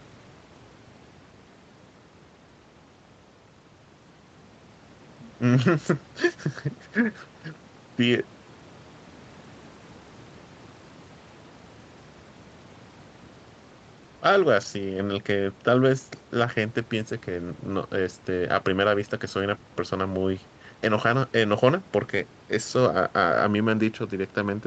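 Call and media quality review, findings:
No faults found in the speech; the top end stops at about 8 kHz, as expected for the microphone processing and the Opus call codec at this bandwidth.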